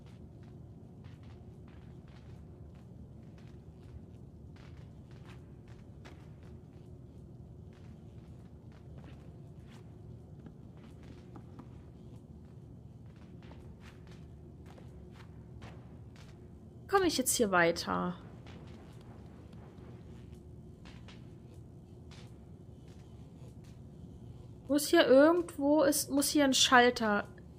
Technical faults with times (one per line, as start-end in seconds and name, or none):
none